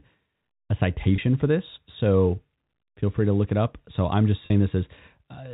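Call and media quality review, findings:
Packet loss with pitch repetition: held, buzzy gaps at 1.16–1.18 s before "for this" and 4.46–4.50 s after "I'm just". Receiver concealment repeating the last pitch period over 20 ms and 40 ms losses, consistent with one and two packets. G.711 telephone path band-limited below 4 kHz.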